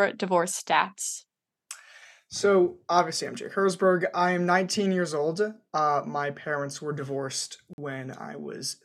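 A gap between stream segments at 7.73 to 7.78 s, just after "my parents were divorced", cuts this speech with a hard-edged hole of silence lasting about 46 ms. Two stream segments, which sound like 2-second segments, leave a timing gap the player fills with silence.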